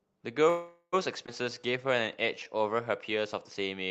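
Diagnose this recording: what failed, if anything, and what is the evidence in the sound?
Call audio freeze, 0.49 to 0.95 s: for about 0.43 s the sound stretches into a fading buzz or hiss, ending in roughly 60 ms of silence, then resumes with nothing lost. This is likely a network stall that emptied the jitter buffer while the receiver extended the last sound.

Skip ahead, 1.27 to 1.29 s: playback jumps forward, with the two sides joined by only a few milliseconds of fill. Around a tenth of a second of speech is gone, dropped in transit or discarded by the jitter buffer while later packets were already queued.

Jitter buffer slow-down, 1.50 to 2.58 s: speech runs at about 89% speed with pitch unchanged, sounds drawn out. The buffer was rebuilding its reserve by repeating single pitch periods and pause fragments, adding 127 ms in total. The Opus wideband path's 8 kHz ceiling applies throughout.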